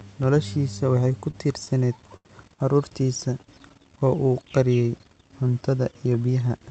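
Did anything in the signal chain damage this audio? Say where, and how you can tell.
Yes. The damage happened in call processing at the receiver's jitter buffer, not in the Opus codec, whose coding sits within an audio band that fits roughly 8 kHz.

Repeated stalls (stutter) run from 1.01 to 2.27 s. There are nine brief hitches across that span, the longest 86 ms, totalling 182 ms, or about 14% of the stretch. Late packets emptied the buffer each time, and the receiver held and extended the last sound until data resumed. Unlike packet loss, nothing is skipped. The speech drags and catches rather than jumping ahead.

A jitter buffer slow-down follows from 3.23 to 4.15 s. The speech runs at 90% speed, stretched by 100 ms, while the pitch stays put. The buffer was rebuilding its reserve by repeating single pitch periods many times in a row. That fixed pitch is what separates it from a clock or resampling error, which would lower the pitch along with the tempo. 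Drawn-out sounds give the repetition away.

A jitter buffer speed-up starts at 6.06 s, right after "qariyay cuntada", and lasts to the end at 6.7 s. The speech runs at 113% speed, about a tenth of a second shorter, again at unchanged pitch. An over-full buffer was trimming tiny pitch-period slices to cut its delay. Because the removals are spread thinly, the speech sounds hurried rather than clipped. That sets it apart from a single dropout or an edit.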